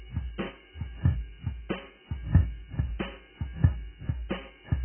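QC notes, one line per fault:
throughout, AAC compression: the music sounds dull and smeared, with nothing above 3.1 kHz and a warbling, fizzy texture on held sounds. The likely cause is heavy AAC-LC coding at a very low bitrate, around 8 kbps, which discards upper bands and coarsely quantises the rest.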